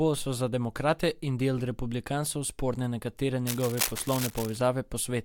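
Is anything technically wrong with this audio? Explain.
Yes, there is cable scratch noise from 3.47 to 4.57 s, right after "del republikancev sporne nekatere": dense, uneven crackling and rustling only a little below the speech level. A worn connector or cable being moved is the likely cause, its contact resistance flickering rapidly. The waveform shows jagged, irregular bursts, and the spectrogram shows ragged broadband smears.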